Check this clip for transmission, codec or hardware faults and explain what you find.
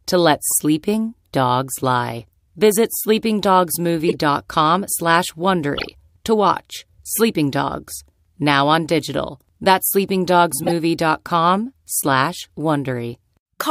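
Corrupt frames decoded: damaged compressed frames were played rather than concealed, so misread gains and codes put energy at wrong frequencies. The speech gets short chirpy, noisy bursts, a few frames long, at 0.49–0.57, 1.75–1.83, 2.92–3.03, 4.08–4.15, 5.75–5.88, 10.63–10.72 and 12.35–12.47 s. Several peak around -5 dBFS.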